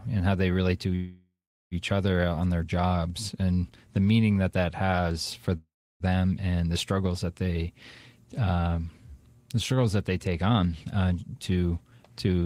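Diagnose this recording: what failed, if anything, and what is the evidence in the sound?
Network stage, call audio freeze: after "how they relate to" (0.95 to 1.74 s) and "that that has for" (5.57 to 6.03 s), a fading buzz decays into silence. On the spectrogram it looks like a smeared tail, then a blank gap. The likely cause is late packets emptying the jitter buffer.

Buffer stage, jitter buffer speed-up: after "they take on uh", from 11.21 to 12.43 s, the sound runs at 113% speed with unchanged pitch, as roughly 150 ms of pitch periods are cut. The waveform keeps the same cycle lengths.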